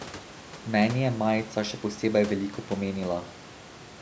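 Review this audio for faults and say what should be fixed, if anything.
No faults turn up in this audio, so nothing needs to be fixed.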